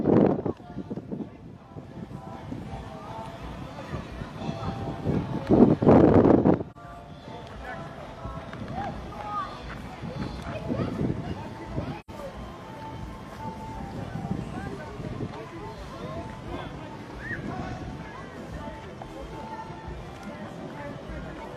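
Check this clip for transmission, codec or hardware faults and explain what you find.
There are two dropouts. AAC frame loss with muting at 6.71–6.77 s and 12.00–12.11 s: zeroed frames fade out and in, leaving a soft dip (one frame) then a longer soft-edged gap (two frames).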